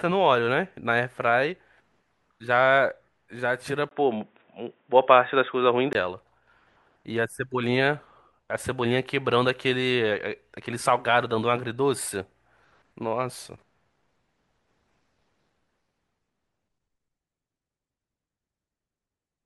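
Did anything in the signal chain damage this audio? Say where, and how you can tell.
Yes. Between 3.89 and 5.95 s the input likely switched to a poorer device at the driver: after a 20 ms gap, speech turns dull, with nothing above 3.8 kHz.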